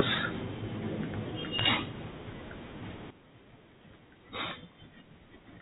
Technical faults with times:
1.59-1.64 bit errors on a digital phone line
3.10-5.62 sudden gain jump

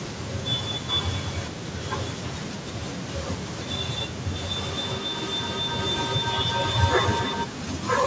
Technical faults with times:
4.56-7.53 feedback howl

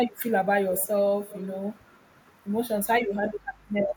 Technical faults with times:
0.74-1.02 echo leak
1.30-1.50 echo leak

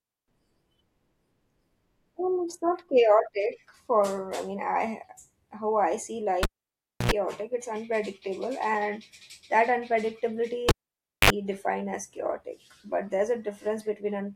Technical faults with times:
6.43-7.11 cable pulled and plugged in
10.69-11.30 cable pulled and plugged in

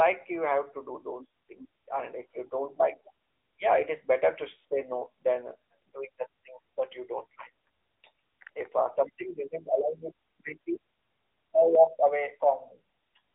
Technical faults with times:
0.00-13.34 AMR narrowband mobile codec
11.75-13.17 channel delay (comb filtering)

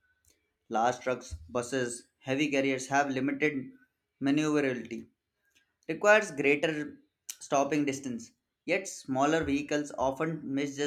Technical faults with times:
none

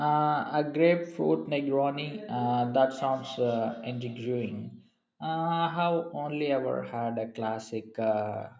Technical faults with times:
2.94-4.73 feedback echo between two devices

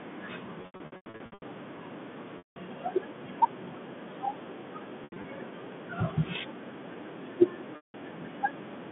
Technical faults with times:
0.62-1.42 packet loss with pitch repetition
2.38-2.56 packet loss with pitch repetition
5.04-5.24 packet loss with pitch repetition
7.76-7.94 packet loss with pitch repetition

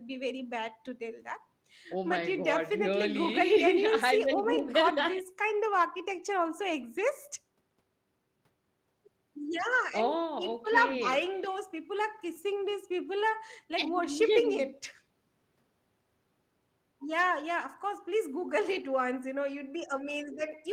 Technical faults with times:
6.99 lost packet rebuilt from error correction

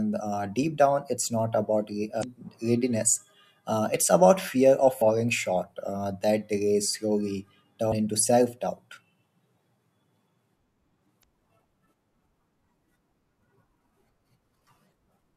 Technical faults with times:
2.20-2.25 damaged data in a compressed stream
5.01 damaged data in a compressed stream
7.91 damaged data in a compressed stream
11.20-11.25 damaged data in a compressed stream

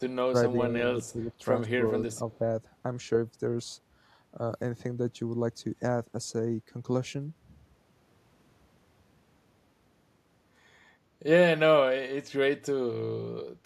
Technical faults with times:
0.29-0.34 speech suppressed in double talk
0.97-1.30 speech suppressed in double talk
1.03-1.12 echo leak
1.77-2.21 speech suppressed in double talk
2.33-2.38 echo leak

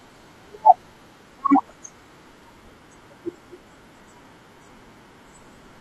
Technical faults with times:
2.93-2.95 damaged data in a compressed stream

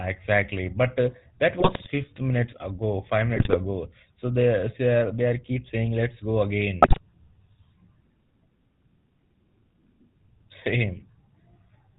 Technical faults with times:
0.00-11.99 GSM full-rate codec
1.60-1.88 GSM bit errors
3.36-3.56 GSM bit errors
6.82-7.01 GSM bit errors

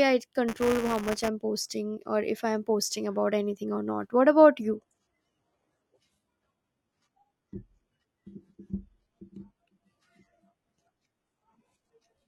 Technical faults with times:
0.48-1.28 buffer tearing
4.63-12.27 adaptive stream at a lower bitrate

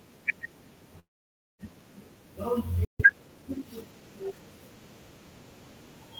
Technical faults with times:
0.99-1.61 long network dropout
2.85-3.00 playback stall
3.00-4.46 time-compressed catch-up

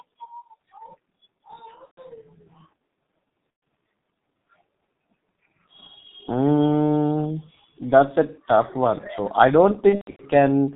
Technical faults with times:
0.00-10.75 G.723.1 codec
1.85-2.02 VoIP packet loss concealed by the speech codec
3.50-3.62 VoIP packet loss concealed by the speech codec
9.89-10.25 VoIP packet loss concealed by the speech codec

